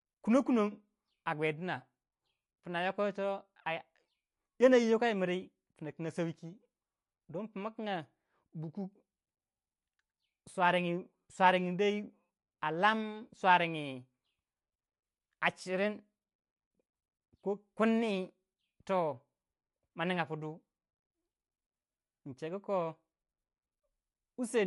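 Speech, likely run through low-bitrate MP3 compression throughout, consistent with about 40 kbps: nothing above 11.3 kHz survives, and sibilants turn watery and swirly with metallic chirps.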